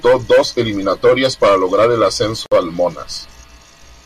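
Two separately encoded pieces of this speech were joined without trimming the encoder's leading delay and final-frame padding, leaving a gap at the join. Right after "eliminatorias para lograr el", from 2.46 to 2.52 s, a 56 ms silence drops in with smeared edges before the speech resumes where it stopped.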